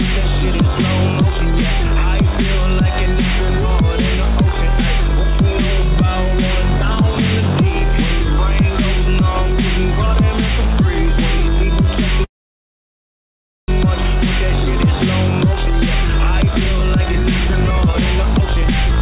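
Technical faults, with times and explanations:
12.24 to 13.70 s, call audio freeze: the sound stops and a brief fading remnant gives way to about 1.4 s of near silence, then resumes exactly where it left off with nothing lost. Delayed packets likely drained the jitter buffer, inserting a 1.44 s gap into the stream.
16.32 to 19.01 s, jitter buffer speed-up: the closing stretch runs about 14% fast at unchanged pitch, sounding hurried. After the stall the buffer held excess audio, so the receiver trimmed short pitch-period pieces repeatedly, roughly 0.4 s in total, to pull the delay back down.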